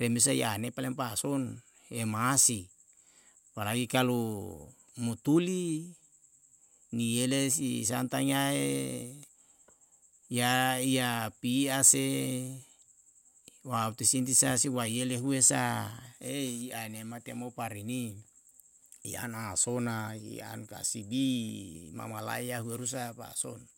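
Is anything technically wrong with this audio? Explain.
No, there's nothing technically wrong here that I can pick out; the speech comes through without any fault worth flagging.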